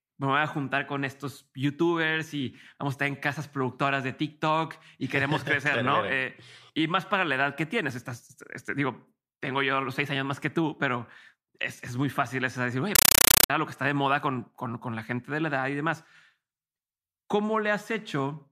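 From 12.95 to 13.50 s, between "fácil es decir oye" and "a lo que está", the speech gives way to chattering static: 8 ms noise bursts separated by gaps, repeating at 31.25 per second. This is a compressed stream played as audio. A Dolby Digital (AC-3) stream on an S/PDIF or HDMI link was treated as ordinary samples and never decoded, so each frame's data sounds as a noise burst followed by padding.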